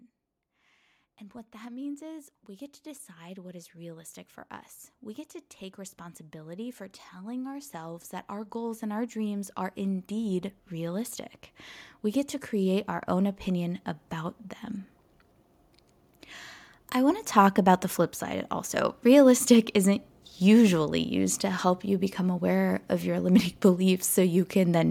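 From 0.5 s to 14.44 s the automatic gain control is rising, as the AGC judges the input too quiet and ramps its gain up by about 20 dB. Speech and background noise swell together slowly across those fourteen seconds, with no distinct step.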